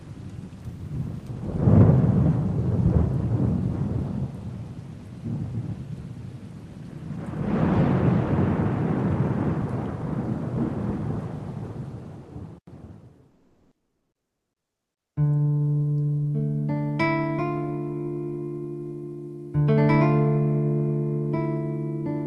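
From 13.31 to 15.16 s, roughly 1.85 s, the real background drops out and you get comfort noise in place of the background. It's a steady, featureless hiss with none of the original texture, and its level shifts by about 8 dB from what was there before. The cause is likely discontinuous transmission: with the background sitting about 70 dB below the loudest parts, the sender treats that stretch as silence and stops sending, and the receiver fills the gap with synthetic noise. Given the Opus call path, which audibly tops out around 12 kHz, that points to Opus DTX.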